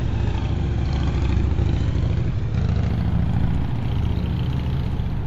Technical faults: imaging from linear upsampling

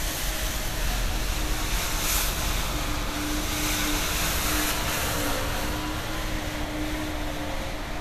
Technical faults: none

